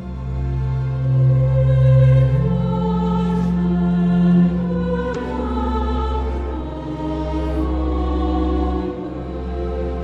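At 5.11 s the audio breaks into a short glitch lasting until 5.16 s, roughly 56 ms, caused by damaged data in the compressed stream. A stretch of the encoded bytes there was corrupted, so the decoder could not interpret the affected frames correctly, lost synchronisation and had to hunt for the next valid frame header before resuming.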